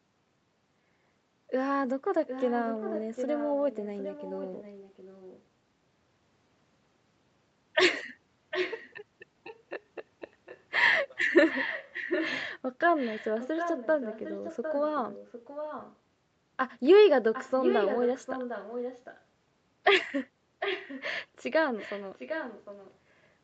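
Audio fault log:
2.27–5.43 s, 8.5–8.91 s, 9.47–10.79 s, 11.49–15.96 s, 17.33–19.22 s, 20.59–21.1 s, 21.76–22.95 s: echo leak. A delayed copy of the speech follows it 755 ms behind. It is loudest, about 5 dB down, at 8.5, 17.33 and 20.59 s, and faintest, about 25 dB down, at 9.47 s. The likely cause is a loudspeaker-side echo canceller passing the returned signal back.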